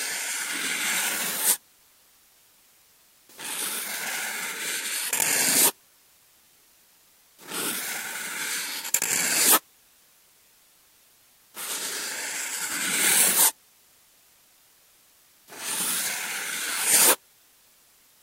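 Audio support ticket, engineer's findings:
Low bit depth with dither, throughout the clip. Constant, even hiss, about 30 dB below the sound, with no distortion. Probably a requantisation stage in the export or conversion path, consistent with a word length of around 9 bits. Dither before rounding turns the quantisation error into steady white noise.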